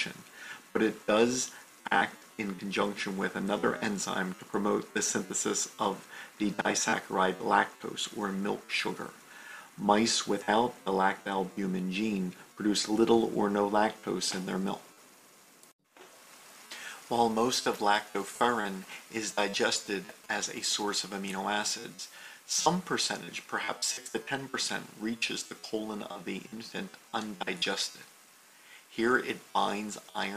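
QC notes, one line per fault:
18.21–21.05 s, GSM signalling bursts: a nearby 2G phone's radio pulses get rectified, giving a galloping dit-dit-dit of short 217 Hz buzzes roughly 20 dB under the sound.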